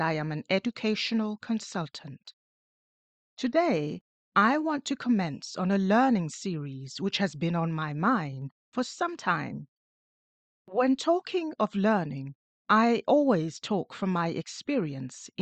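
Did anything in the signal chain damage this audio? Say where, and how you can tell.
No, nothing stood out on listening to this speech recording.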